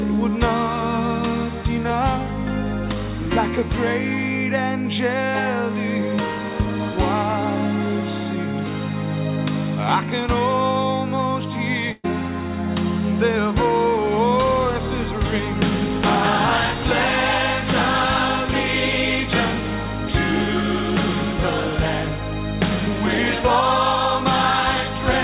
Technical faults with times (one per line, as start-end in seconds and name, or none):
11.92-12.06 burst of packet loss